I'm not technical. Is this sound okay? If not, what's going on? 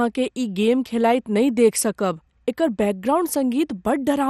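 No. MP2 compression damage runs through the whole clip: the speech sounds dull, with a gurgling, grainy edge, and nothing above about 15.7 kHz. This likely comes from MP2 coding, which saved space by dropping and roughly approximating detail.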